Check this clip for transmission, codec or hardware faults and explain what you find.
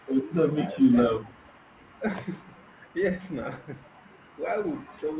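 Two faults are present in this speech clip: echo leaking back from the far end, and the talker being pushed down during double talk. Both sit on a call path limited to 4 kHz, which fits G.711 mu-law.

Echo leak, from 0.2 to 0.34 s and again from 1.21 to 2.0 s. The likely cause is a far-end loudspeaker whose echo canceller failed to cancel everything its microphone picked up, so a residue was sent back. The result is a delayed copy of the speech trailing about 420 ms behind. It is very faint in the first stretch and slightly stronger in the longer second one, at roughly 35 to 40 dB below the speech.

Speech suppressed in double talk, from 0.52 to 0.69 s and from 0.89 to 1.03 s. When both sides spoke at once, the echo canceller likely could not separate the local talker from loudspeaker echo, so it attenuated everything. The speech sinks in brief pieces. The first dip is about 10 dB and lasts roughly 70 ms in total. 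The second goes deeper, close to 20 dB, across about 150 ms.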